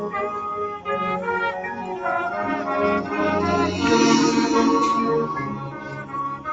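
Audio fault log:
throughout: noise suppressor applied to music or sounds. A speech-tuned suppressor treats steady tones and tails as noise, so levels pump and thin by around 5 dB.
5.53–6.15 s: sound cut by the noise suppressor. This stretch was judged noise and pulled down by up to about 8 dB, sinking while sudden onsets survived.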